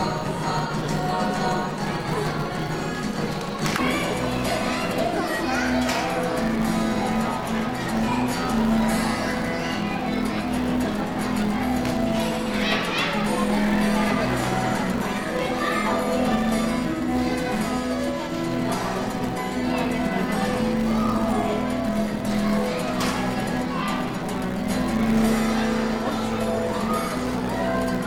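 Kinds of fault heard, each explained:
Filter restarted on every block: the filter loses its memory at each block boundary and starts from silence, leaving a transient there. This produces a steady buzz near 188 Hz throughout, which fits a 256-sample block. The buzz follows the sound's level.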